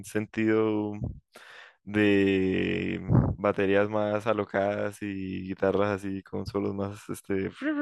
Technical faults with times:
none

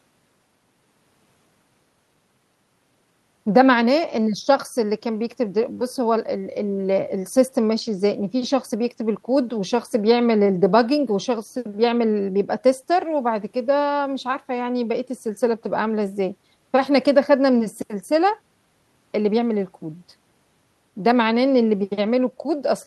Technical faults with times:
none

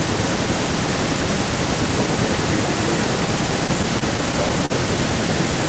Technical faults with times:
3.67-4.72 repeated stalls (stutter)

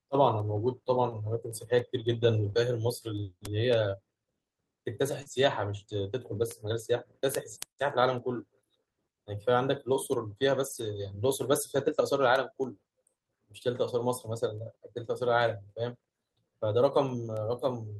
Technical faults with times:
2.45-2.66 lost packet rebuilt from error correction
2.53-2.56 short concealed packet loss
5.22-5.28 short concealed packet loss
5.26-5.44 lost packet rebuilt from error correction
7.48-7.58 lost packet rebuilt from error correction
10.66-11.04 lost packet rebuilt from error correction

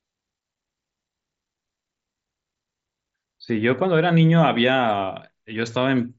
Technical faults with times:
none

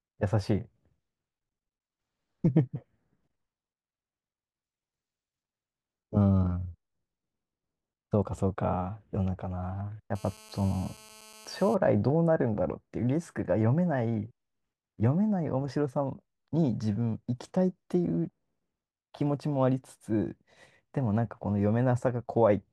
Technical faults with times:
10.15-11.75 GSM phone buzz

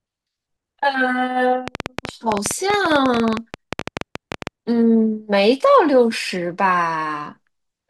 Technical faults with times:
1.68-4.48 train of clicks

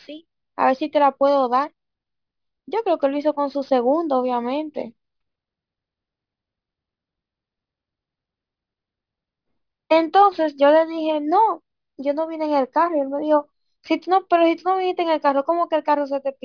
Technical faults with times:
0.00-16.44 aliasing

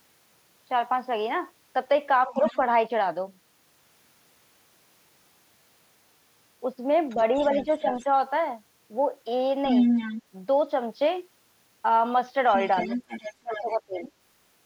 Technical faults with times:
2.25-2.43 speech suppressed in double talk
2.36-2.58 other side's voice leaking through
7.09-8.04 other side's voice leaking through
7.15-8.06 speech suppressed in double talk
9.68-10.20 other side's voice leaking through
12.48-14.11 other side's voice leaking through
12.87-14.03 speech suppressed in double talk

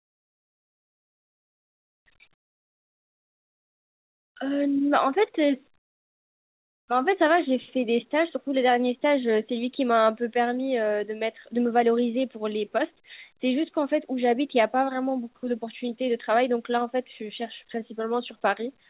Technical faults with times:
0.00-2.06 comfort noise in place of the background
2.34-4.36 comfort noise in place of the background
5.78-6.88 comfort noise in place of the background

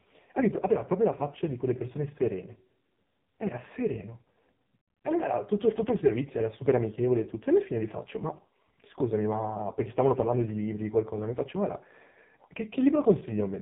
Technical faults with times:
0.00-13.61 AMR narrowband mobile codec

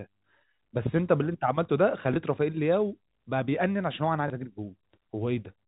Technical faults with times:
2.14-2.16 packet loss with last packet repeated
4.28 packet loss with last packet repeated

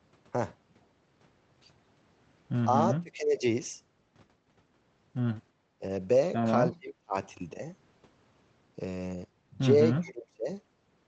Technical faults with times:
2.99-3.44 speech suppressed in double talk
5.79-5.83 speech suppressed in double talk
6.73-7.15 speech suppressed in double talk
10.00-10.48 speech suppressed in double talk

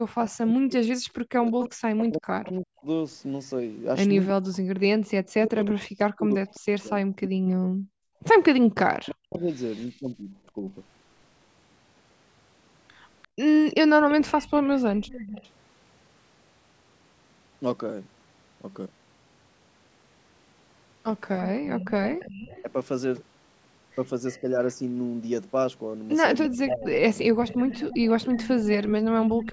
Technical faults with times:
0.17-10.66 speech suppressed in double talk
1.65-7.55 echo leak
8.07-8.22 background gated by the echo canceller
13.22-15.49 echo leak
21.63-29.52 echo leak
24.41-27.70 speech suppressed in double talk

